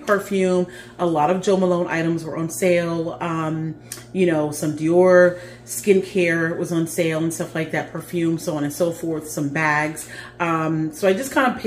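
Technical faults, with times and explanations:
Throughout: mains hum. A steady low tone sits under the whole clip at 60 Hz. It stays well below the wanted sound, around 25 dB down, but it never stops. A few low harmonics thicken it. The hum comes from the power line leaking into the signal path. A ground loop between connected equipment or a nearby transformer can couple that 60 Hz current into the audio.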